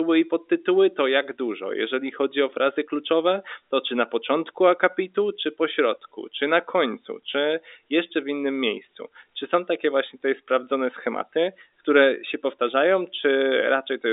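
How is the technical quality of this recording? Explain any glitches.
No glitches or problems are audible in this recording.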